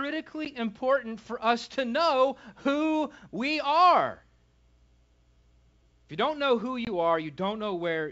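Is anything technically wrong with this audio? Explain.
Yes, there is packet loss on an ADPCM call, twice: a 10 ms hole near 0.45–0.48 s before "important for us to", and a 20 ms hole at 6.85–6.88 s after "you don't know who." Silence fills each gap, and the decoder's predictor and step size lose sync, so the sound returns briefly slightly distorted, which marks it as more than a clean dropout. The G.722 wideband telephone coding behind it sounds clear up to about 7 kHz.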